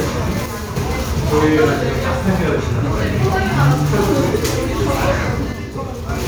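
At 0.46 s the sound suddenly drops by about 6 dB, holds there until 0.76 s, then snaps back. The same thing happens from 5.53 to 6.09 s. The likely cause is one channel dropping out of a stereo pair. Once summed to mono, anything shared by both sides loses half its level, and anything carried only by the missing side vanishes entirely, so it sounds like a hard, brief dip rather than a fade.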